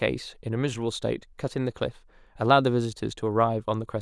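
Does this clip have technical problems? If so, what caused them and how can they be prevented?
No, nothing in this speech recording stood out as a technical problem on listening, so there is nothing here to trace to a cause or prevent.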